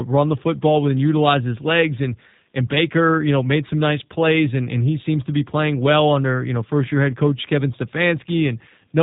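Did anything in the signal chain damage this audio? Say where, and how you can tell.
Yes: G.729 codec damage throughout, at the codec stage. Nothing above 3.8 kHz survives, and the speech is rough and synthetic, rebuilt from filter and pitch pulses, which fits an 8 kbit/s stream.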